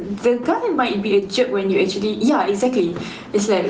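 Gain pumping runs through the whole speech clip. The level keeps lurching by around 10 dB, leaving everything squashed. That's likely a far-too-hot input gain with a fast limiter clamping down. The call codec's top end, stopping near 12 kHz, fits Opus at a modest bitrate.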